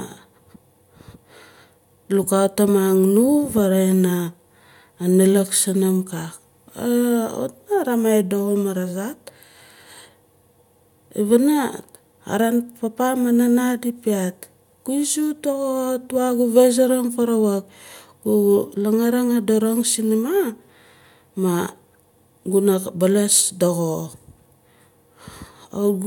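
No faults to report in the speech; nothing in the signal path calls for a fix.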